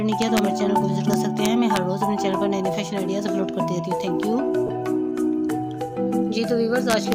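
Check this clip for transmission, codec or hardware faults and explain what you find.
Two faults are present: integer overflow in three places and a brief loss of LE Audio frames.

Integer overflow, 0.22–0.39 s, 1.14–1.77 s and 6.90–7.12 s: peaks exceeding the integer limit by about 1–2 dB wrap to the opposite sign, producing harsh cracks far sharper than clipping.

Lost LE Audio frames, 4.67–4.69 s: about 20 ms of Bluetooth audio went missing, consistent with two 10 ms frames. The LC3 decoder filled the gap with sign-scrambled repeats of the last spectrum, giving a short noisy smear.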